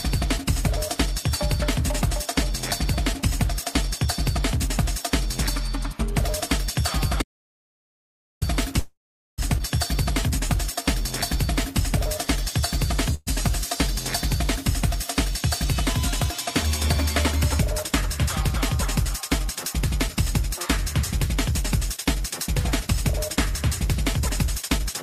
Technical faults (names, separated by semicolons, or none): audio dropout to silence; call audio freeze; skip ahead; jitter buffer slow-down; jitter buffer speed-up